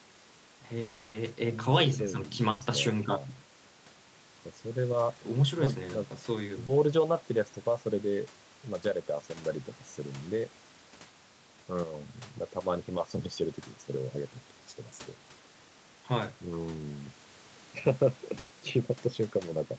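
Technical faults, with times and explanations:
0.81–1.16 s, long network dropout: for about a third of a second the sound is replaced by a continuation of what came just before, a buzz or hiss that fades without falling fully silent. The likely cause is audio failing to arrive; when it resumes, roughly 320 ms is gone.
2.50–2.62 s and 18.38–18.52 s, burst of packet loss: a run of packets went missing, 100 ms in the first and 120 ms in the second. The receiver stretched the last sound and turned it down, heard as a held buzz or fading hiss, then jumped ahead past the lost audio.
5.64–5.68 s and 6.66–6.70 s, short concealed packet loss: about 20 ms each time never reached the decoder in time. The gap was patched by continuing the preceding sound and blending back into the real signal, which leaves a brief smear or wobble.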